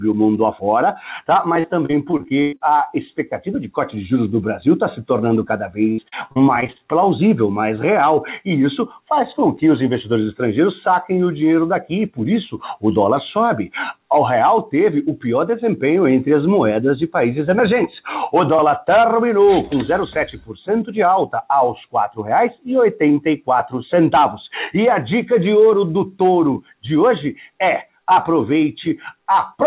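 Repeated packet loss hits at 1.6–2.62 s and again at 5.92–6.81 s. Nine gaps each time are patched by repeating prior sound, so it turns choppy and robotic.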